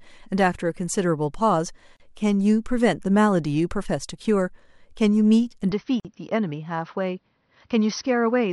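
At 1.97 to 2.00 s a 34 ms silence cuts into the continuous speech, and a second gap of 49 ms follows at 6.00 to 6.05 s. These are gaps at a join of encoded pieces, spaced 4 s apart. Each piece kept its encoder's leading delay and padded final frame, so abrupt, slightly smeared dropouts open before the speech resumes where it stopped.

From 5.72 s to the end, the sound turns duller and about 5 dB quieter, with no silence at the transition. Nothing remains above 6 kHz, and a new noise floor sits roughly 50 dB below the signal. This is likely an input switched to a poorer, narrower-band device.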